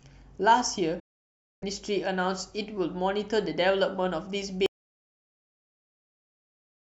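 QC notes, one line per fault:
1.00–1.64 s, Bluetooth dropout: the speech breaks into a hole of roughly 0.6 s, then carries on as though it had kept playing underneath. That points to a likely run of wireless packets arriving too late at the headphones and being discarded, which fits about thirty lost frames. Unlike a dropout to silence, the gap is brief and self-healing: the link recovers on its own and normal playback picks up again.
4.66 s to end, audio dropout to silence: the speech cuts off mid-flow and the rest of the clip is silent, with no room tone or noise floor left at all. The input was likely lost, through a disconnected source or a mute, while recording continued writing silence. What separates it from the Bluetooth hole is that the sound never returns, and the silence runs to the end rather than being a short gap.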